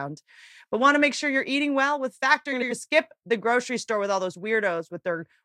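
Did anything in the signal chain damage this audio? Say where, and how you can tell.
Yes. Frames out of order from 2.52 to 2.72 s, just before "to skip the grocery": a network or transport fault in which two adjacent blocks of about 93 ms each played swapped, producing a garbled flutter. No time is lost.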